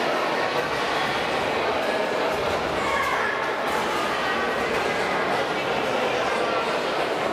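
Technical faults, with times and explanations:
Nothing stood out as a technical problem on listening.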